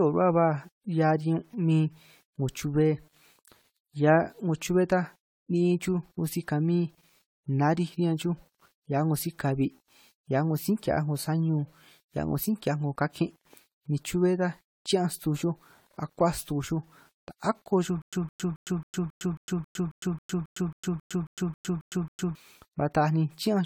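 From the first second to the end, the quieter parts of the speech carry a gritty, grainy edge that rises and falls with the voice, and the softest tails crackle rather than fading smoothly. This is low bit depth without dither. The samples were likely rounded to about 9 bits with no noise added to mask the steps, so the rounding error tracks the signal and sits roughly 40 dB below it, turning into distortion instead of a steady hiss.

Throughout the clip there is also a swirling, hollow, smeared quality, with consonant onsets blurred and a watery shimmer that seems worse than a single moderate encode would cause. That is generation loss. The audio was likely passed through a lossy codec around ten times, consistent with repeated AAC-LC encoding at 96 kbit/s. Each pass quantised the signal again on a shifted frame grid, so spectral holes and noise built up. Nothing is present above 20 kHz.

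From 18.02 s to 22.35 s, the audio catches on a short fragment and repeats it. A burst of 162.6 ms plays, then 108 ms of dead digital silence follows, cycling every 271 ms, sixteen times in all. This is a stutter with silent gaps. The player or stream likely stalled, replayed its last buffered piece at each retry, then ran dry, so the speech that belonged in those four seconds is missing.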